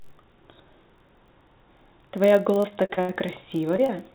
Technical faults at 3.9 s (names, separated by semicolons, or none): block size mismatch (padded); short concealed packet loss